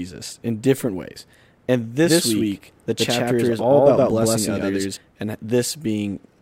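At 2.05–4.97 s a doubled audio track: an equal-level copy, likely from a slower path, lags a tenth of a second, duplicating each spectrogram shape.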